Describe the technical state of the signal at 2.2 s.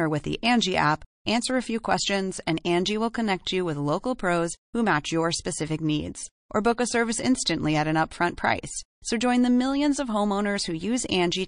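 At 2.2 s the speech carries plainly audible coding damage that runs through the whole clip. The treble is cut off at a fixed point, and weak high-frequency detail flickers in and out from frame to frame, giving a watery, swirling texture with metallic chirps on sibilants and softened consonant attacks. This is likely MP3 compression, with the encoder short of bits, consistent with a low bitrate of around 40 kbps.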